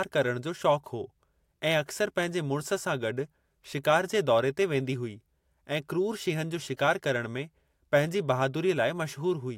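There are no technical faults to describe in this speech recording.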